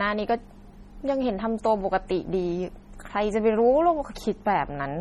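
Right through the speech there's heavy MP3 compression damage, likely from a low bitrate around 32 kbps. Weak frequency lines flicker in and out between frames, so it sounds watery and swirly, with chirpy s sounds, smeared onsets, and nothing above 17.8 kHz.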